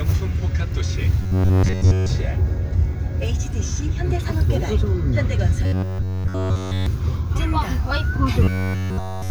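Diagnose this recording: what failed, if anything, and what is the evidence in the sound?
Robotic sound from repeated short buffers appears from 1.22 to 2.09 s, 5.64 to 6.86 s, and 8.43 s to the end. This is likely a driver or buffer underrun. During each stretch, essentially all of the sound becomes a fixed, metallic buzz at 93.8 Hz. That pitch fits one block of about 10.7 ms being replayed over and over while fresh audio is skipped, so the repetition rate itself becomes the tone.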